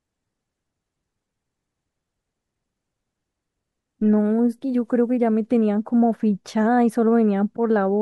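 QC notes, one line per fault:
No technical faults are audible anywhere in the speech recording, and the signal holds steady throughout.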